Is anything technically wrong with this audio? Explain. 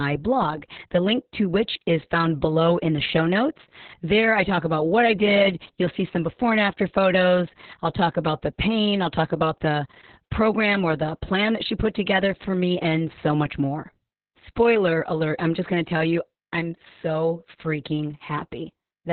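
Yes. Opus voice compression is audible throughout the speech. The SILK linear-prediction coder has narrowed the band to narrowband, leaving nothing above about 4.3 kHz, and codes the excitation very coarsely, which fits a bitrate near 6 kbps and long 60 ms frames. The damage is heavy. The voice sounds muffled and telephone-like, with a hoarse, buzzy, slightly robotic texture where fine detail of the excitation has been lost.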